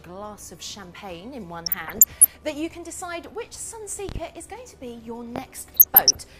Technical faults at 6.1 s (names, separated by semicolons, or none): DAB burbling